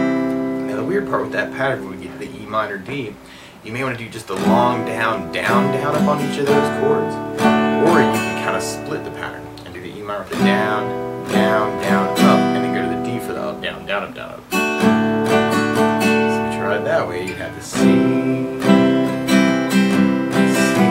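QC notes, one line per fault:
No audible faults found anywhere in this clip.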